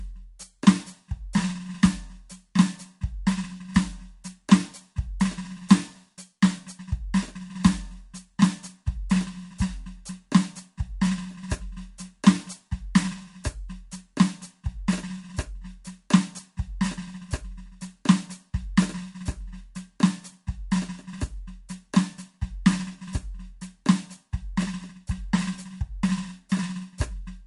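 MP3 compression damage runs through the whole music clip, likely from an MP3 encode starved of bits, which fits a low bitrate near 48 kbps. Nothing survives above 11.2 kHz, and weak frequency components flicker between frames, giving a plainly audible watery swirl.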